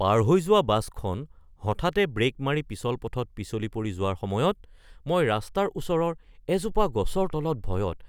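Nothing in this recording stands out as a technical fault, so there's no moment along the way that calls for a closer look.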